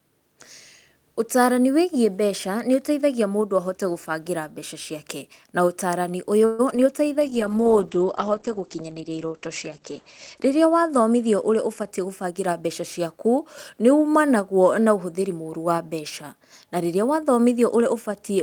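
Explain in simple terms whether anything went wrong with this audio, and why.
Around 6.45 s the speech stops moving forward for about 0.13 s: the last sound hangs on as a short fading buzz, then talking picks up exactly where it left off. That is a call audio freeze. The likely cause is packets getting held up in transit, so the receiver's waiting store ran dry and it stretched out the final sound until data arrived. Nothing is lost, but a small pause has been inserted.

Just after that, two tiny glitches land at 6.71 to 6.74 s and 6.76 to 6.79 s, each a brief smear or flutter rather than a clean sound. This is short concealed packet loss. About 20 ms of audio failed to arrive each time, and the receiver patched each hole by continuing the sound before it and blending back into the real audio.

From 7.20 s to 11.95 s the speech turns dull and rough, at its worst for nearly 3 seconds, with the crisp top end missing above about 8 kHz. 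This is a call bitrate drop. The connection judged it had less room, so the sender packed the sound into far less data. It coded the sound more coarsely and dropped the high frequencies until conditions improved.

Between 10.99 s and 12.82 s the talking runs slightly hurried, about 7% fast, though the pitch stays the same. This is a jitter buffer speed-up. After the earlier delay, the receiver was holding more audio than it wanted. To catch up, it quietly trimmed many tiny slices, roughly a seventh of a second in total, which pulls the call back toward real time.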